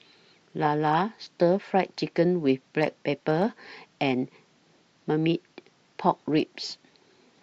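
Nothing stood out on listening to this speech recording; no technical faults could be heard at any point.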